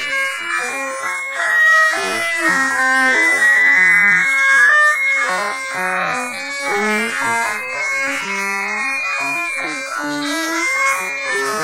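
Nothing here calls for comment, as the sound runs along without any technical trouble turning up at any point.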